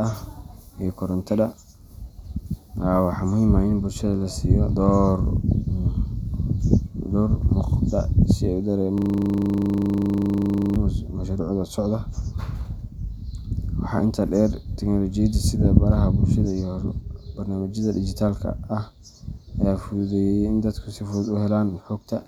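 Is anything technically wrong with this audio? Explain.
Yes. From 8.98 s to 10.76 s there is a system hang loop: the system froze while the audio hardware kept replaying one 40 ms stretch of its buffer, about 44 times. This sounds like a steady buzz at 25 Hz. A waveform shows one identical segment tiled repeatedly, and a spectrogram shows frozen, evenly spaced vertical bands at 25 per second.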